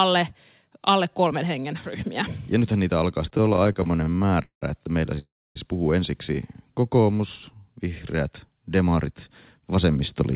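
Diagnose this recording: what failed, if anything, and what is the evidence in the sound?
Repeated stalls (stutter) in the network and jitter buffer stage, from 3.3 s to 4.64 s, just after "nythän niitä alkaa" and up to "että meillä". The speech halts about 25 times. Each gap is bridged by stretching the last sound, sometimes fading it, with the longest hold near 192 ms. Together they make up about 474 ms, roughly a third of that span. Packets were reaching the receiver slower than playout, so the buffer repeatedly ran dry. Nothing is lost, but the speech drags and judders.

A call audio freeze follows from 5.19 s to 5.57 s, between "että meillä" and "puhuu ensiksi". The last sound is continued briefly, then decays into about 270 ms of silence before speech resumes exactly where it stopped. The total inserted gap is about 366 ms, and the playout delay grows by the same amount afterwards. 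The likely cause is a burst of packets held up in the network, which emptied the jitter buffer. No speech is skipped.

A jitter buffer slow-down runs from 6.74 s to 7.61 s. Over that stretch the speech plays at about 91% of normal rate while keeping its pitch. Sounds are drawn out. About 89 ms is added in total. The receiver was rebuilding its reserve, replicating single pitch cycles many times in a row rather than inserting one obvious gap.

A jitter buffer speed-up occurs from 9.59 s to 10.22 s, right after "vihreät demarit". The speech runs at about 110% of normal rate with unchanged pitch and sounds hurried. About 70 ms is trimmed away by repeatedly cutting short pitch-period segments. This happens when the buffer holds more audio than its target, typically after late packets land together, and the receiver drains the excess. All of this sits on a call path whose G.711 mu-law coding, which fits 64 kbps, leaves nothing above 4 kHz.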